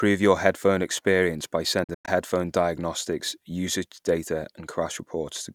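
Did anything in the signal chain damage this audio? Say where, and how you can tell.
Yes. A Bluetooth dropout between 1.84 and 2.08 s leaves silent gaps, the longest about 100 ms, with sound resuming as if it had played on, likely from packets missing the wireless link.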